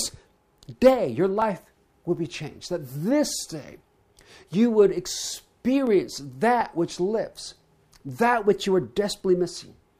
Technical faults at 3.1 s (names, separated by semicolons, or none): clock drift buffer slips